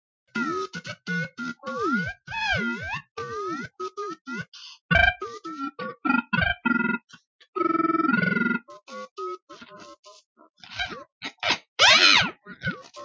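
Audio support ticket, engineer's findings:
No faults found; call mic processing working normally.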